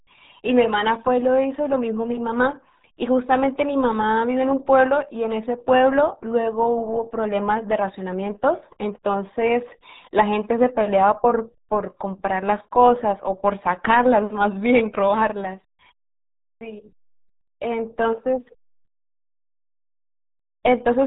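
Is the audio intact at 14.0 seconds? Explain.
No. At 14.0 seconds, as throughout the speech, the audio is muffled and gargly, with nothing above 3.8 kHz. This is the RealAudio 14.4 codec: heavy compression, consistent with an 8 kbit/s dial-up stream, strips the highs and smears the remaining detail.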